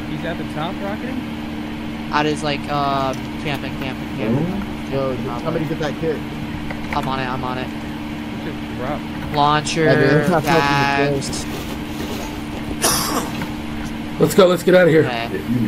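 No technical faults can be heard anywhere in the recording. Nothing in the sound points to a problem in how it was captured or passed along.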